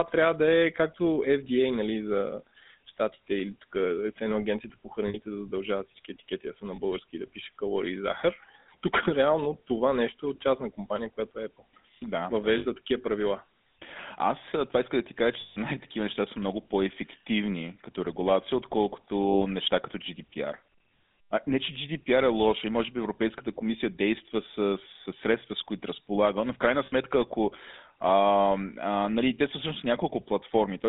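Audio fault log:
Throughout: GSM full-rate codec. The speech is confined to roughly 200 Hz to 3.7 kHz, with nothing above. The codec rebuilds each voice from a vocal-tract filter driven by a sparse, regularly spaced pulse train, keeping only one excitation sample in three. That coarse excitation gives the plainly audible buzzy, gravelly grain on voiced sounds, which fits the 13 kbps full-rate scheme.
5.08–5.16 s, 6.76–6.79 s, 12.58–12.66 s, 15.40–15.58 s, 19.28–19.41 s, 26.86–26.93 s: lost GSM frames. At each point the decoder stopped receiving usable data and repeated the last good frame's settings, so the sound freezes into a rough, metallic ring. Most gaps last about 60 ms and the one at 6.76 s about 20 ms. At 15.40 s the gap stretches to 160 ms.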